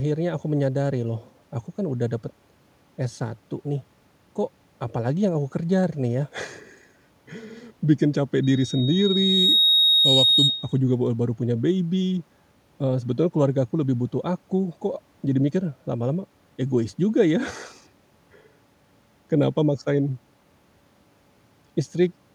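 From 8.43 s to 10.79 s a single piercing tone near 3.8 kHz rises out of the speech, swelling over about a second until it sits a few decibels louder than the talker. This is loudspeaker feedback squeal: the microphone was picking up the loudspeaker it fed, and at 3.8 kHz the loop gain went above one, so that frequency kept reinforcing itself.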